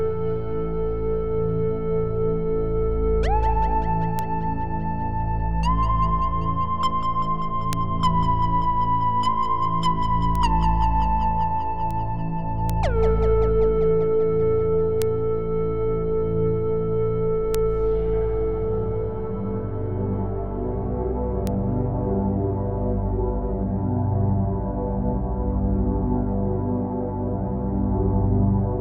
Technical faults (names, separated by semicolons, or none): bit error spike